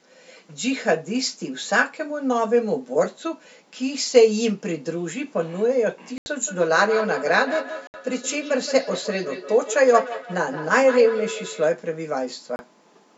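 At 6.18 s the speech drops to dead silence for about 81 ms and then carries on, and the same cut recurs at 7.87 s for about 68 ms and at 12.56 s for about 31 ms. These are most likely Bluetooth stalls: radio interference delayed packets on the wireless link, the headphones' buffer emptied, and playback froze until the resent data arrived.

From 6.42 s to 11.72 s each stretch of speech comes back roughly 150 ms later as a fainter copy, peaking at about 10 dB below the speech. This is feedback echo between two devices. A second device in the same room is on the call and plays out what this microphone sent, and the microphone picks it up again. The local echo canceller cannot remove it because it only subtracts what its own device plays.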